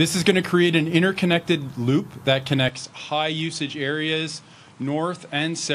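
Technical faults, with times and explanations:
2.69 s to the end: input switched to a poorer device. At 2.69 s the sound abruptly turns duller and narrower. Nothing remains above 10.5 kHz from there on. The level drops by around 5 dB. A new background noise appears, roughly 35 dB below the signal. There is no silence at the change. The cause is likely a switch to a second microphone or headset with a narrower band, a lower gain and its own noise floor.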